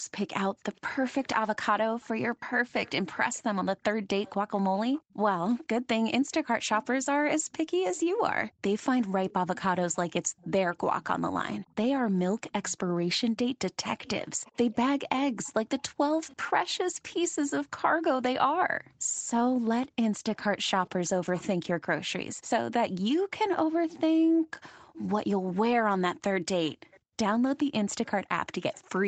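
From 0.00 to 0.05 s the background is gated by the echo canceller. The room tone drops by about 40 dB because the canceller pulls the microphone down while the loudspeaker plays. The same momentary hole in the ambience recurs at 5.03–5.20 s (about 38 dB), 18.83–19.04 s (a shallower dip of about 19 dB), 24.27–24.51 s and 27.00–27.16 s (both about 40 dB). Each time, the background returns once the canceller releases.

An echo leak runs from 0.28 to 17.50 s, again from 19.16 to 24.99 s, and from 26.66 to 28.81 s. A faint copy of the speech trails it by 495 ms. It sits roughly 25 dB below the direct signal and falls to around 30 dB down in the last stretch. This is likely a far-end loudspeaker whose echo canceller did not fully remove the pickup, so the residue was sent back.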